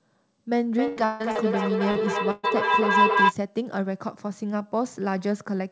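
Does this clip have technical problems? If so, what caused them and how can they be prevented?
Yes. A feedback howl runs from 0.66 to 3.35 s: a tone of roughly 1 kHz builds up, pulsing about every 0.3 s and peaking at about 5 dB above the speech. It comes from two devices in the same room joining the call, so microphone and loudspeaker form a loop with gain above unity, and each pass reinforces the frequency the loop favours. Prevent it by muting one device or having co-located participants use headphones or a single device.

A burst of packet loss occurs at 0.88 to 1.00 s and again at 2.31 to 2.46 s. In the first, the receiver stretches the last sound for about 86 ms over an 80 ms hole, and in the second for about 121 ms over a 120 ms hole, giving a held buzz or hiss that fades before speech resumes with material skipped. Reduce it with a more stable connection, forward error correction, or a wired rather than wireless link.

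From 1.05 to 1.23 s the audio is replaced by about 152 ms of continued, fading sound with no fully silent stretch, and about 160 ms of the original never returns. The likely cause is a long network dropout, where the receiver receives nothing and extends the last signal until real audio arrives again. Prevent it by fixing the underlying link instability, such as congested Wi-Fi, weak cellular coverage or an overloaded uplink.

Short concealed packet loss appears at 1.32 to 1.38 s and 1.91 to 1.98 s. Each time about 40 ms failed to reach the decoder in time, and roughly 34 to 40 ms of synthesised continuation covers the gap. This is heard as a brief smear or wobble before the signal blends back into the real speech. Minimise it with a slightly deeper jitter buffer and a less congested network path.

The call path itself is G.722, which leaves nothing above 8 kHz.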